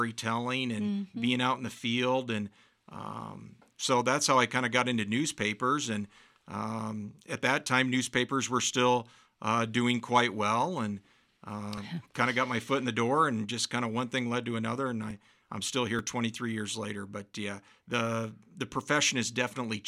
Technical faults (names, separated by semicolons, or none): dropped buffer (overrun)